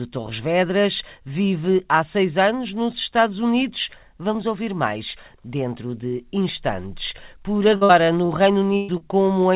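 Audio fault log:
7.76–8.32 s, repeated packet loss (robotic sound): four separate holes, the longest 51 ms, patched by repeating the preceding sound, so about 30% of the stretch is synthetic. That recurring patch-and-resume pattern gives a choppy texture with pieces missing rather than one single dropout.
8.77–8.91 s, burst of packet loss: one unbroken hole of about 120 ms, filled by stretching the last sound and fading it, with no silence at all. Unlike the earlier choppy run, it is a single held buzz or hiss, then the sound jumps ahead.
8.97–9.03 s, short concealed packet loss: only about 30 ms went missing and was bridged by continuing the previous sound before blending back in. It comes across as a quick smear or wobble against band-limited audio that stops at 4 kHz.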